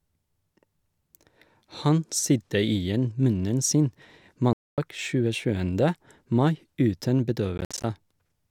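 At 4.53 s the speech cuts out. Silence holds until 4.78 s, about a quarter second. When it returns, it has moved on, as if it kept playing unheard. This is likely a Bluetooth dropout, where data missed its deadline and was discarded. At 7.58 s what is likely a second one starts. Here the gaps are broken up, spread until 7.84 s. The longest hole lasts 58 ms, and the speech stutters through.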